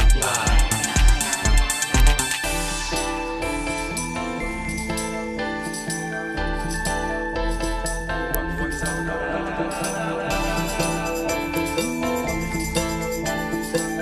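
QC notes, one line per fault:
2.00 s and 8.35 s, electrical switching spike: each is a sharp snap, about 3 ms and 1 ms long respectively, sitting on top of the sound rather than interrupting it, so the audio underneath continues unbroken. The likely cause is a nearby switch or static discharge arcing and coupling into the audio line. On a waveform each shows as a thin, near-vertical spike; on a spectrogram, as a narrow vertical stripe spanning the full frequency range.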